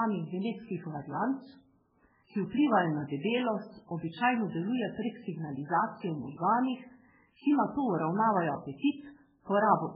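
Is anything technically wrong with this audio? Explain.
Yes. Throughout, the speech sounds watery and swirly, with nothing above about 5.2 kHz. This is likely MP3 compression at a very low bitrate, zeroing weak frequency lines frame to frame. At 8.77 s, pre-echo appears: block-spread quantisation noise puts a hiss about 43 ms ahead of an attack, softening it.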